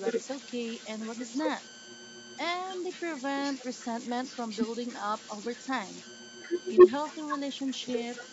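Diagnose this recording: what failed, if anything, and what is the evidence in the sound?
The converter stage shows idle tones for the whole clip: a whistle sits around 1.5 kHz in the pauses, and a grainy hiss runs under quieter speech, with the error only about 9 dB below the signal. Without dither, the delta-sigma modulator settles into repeating bit patterns on small inputs, and the pitch of the resulting tone follows the input offset. On a spectrogram this appears as a thin horizontal line near 1.5 kHz that persists through the gaps, and the waveform shows a rough, textured floor where it should be flat.

There is also an echo leak, a delayed copy of the speech trailing the original by 112 ms. It runs from 0.04 to 3.22 s and from 3.43 to 3.86 s at about 15 dB below the speech, appears briefly near 4.05 to 4.10 s at around 25 dB down, and from 4.27 s to the end it is roughly as loud as the speech itself. 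The likely cause is that the far side's echo canceller failed to remove its loudspeaker pickup and sent it back. On a spectrogram, each syllable shows a ghost shifted 112 ms to the right, and the copy becomes as bright as the original in the last stretch. The call processing's bass roll-off is ordinary and does not point to a fault.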